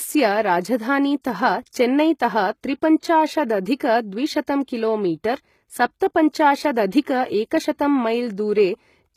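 Throughout the speech, the upper spectrum is most likely being rebuilt by HE-AAC compression rather than coded directly. Copied-up bands replace the real treble, which fits a very low bitrate near 20 kbps, so s sounds turn gritty and metallic, with nothing above 14.9 kHz.

At 6.91 s, pre-echo appears. The transform block spread its quantisation noise across the quiet moment ahead of a sharp onset, so a brief hiss about 16 ms long runs in just before the attack and blurs its edge.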